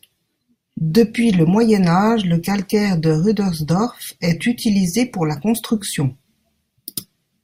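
No technical faults can be heard anywhere in the recording.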